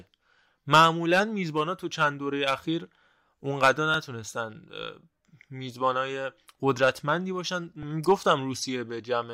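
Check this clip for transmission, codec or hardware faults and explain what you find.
Two repeated buffer faults, at 3.94 s and 7.83 s. Each time new audio arrived late, so the device replayed a tiny 1.33 ms slice, which fits a 64-sample buffer, several times back to back. Because the piece is so short, the hard joins sound like a brief click or buzz rather than a stutter, with essentially no speech lost.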